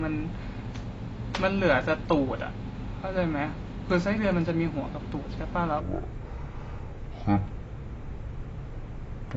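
Throughout, the speech sounds dull and smeared, with nothing above 7.9 kHz and a fizzy, warbling edge, likely AAC compression at a low bitrate, consistent with about 24 kbps. From 5.80 s to the end it turns deep and dragging, roughly ten semitones lower, likely a section at the wrong speed, playing at 0.554 times the proper rate.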